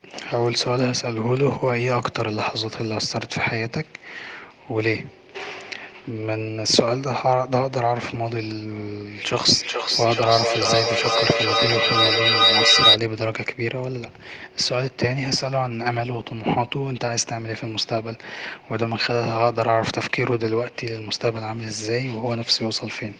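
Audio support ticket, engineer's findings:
Acoustic loop between two endpoints on same call, same room. Mic picks up other device's speaker, gain above unity per pass. Feedback howl 9.25–13.02 s: repeats build instead of decaying, narrow to tone around 4 kHz, pulsing roughly every 400 ms (loop delay). Peaks about 5 dB over speech. Stops when loop broken. Fix: mute or separate one device.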